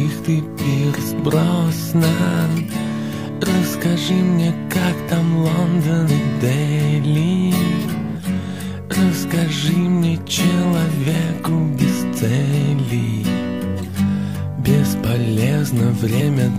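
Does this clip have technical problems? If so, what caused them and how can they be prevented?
Yes. Compressed frames are skipped at 4.04–4.10 s, 6.04–6.08 s and 16.16–16.22 s. Whole 46.4 ms frames are lost or rejected as damaged. The sound jumps ahead about 150 ms, then about 100 ms twice. Check file integrity after transfer and re-fetch damaged files.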